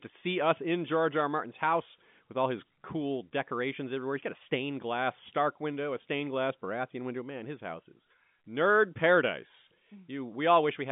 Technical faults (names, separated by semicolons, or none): none